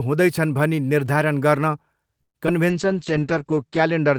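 A speech recording with three network-related faults close together. From 2.21 to 2.37 s there is a call audio freeze: packets were likely delayed in transit and the jitter buffer ran dry, so the receiver stretched the last sound into a short fading tail and then about 120 ms of silence. The speech resumes exactly where it paused, adding a gap of roughly 134 ms without losing anything. Then, at 2.47 to 2.49 s, short concealed packet loss: about 40 ms of audio never reached the decoder, and the receiver jumped ahead by around 30 ms to catch up. Only a sliver was synthesised to bridge the hole, so it is heard as a quick smear with a fragment of speech missing. From 2.71 s to the end comes a call bitrate drop. The bandwidth estimate fell and the encoder was throttled, which fits a fall from about 32 to 9 kbps. It was held at the lowest setting for about 1.1 s, and the audio band shrank from 20 kHz to 8 kHz, leaving the voice muffled, coarse and watery.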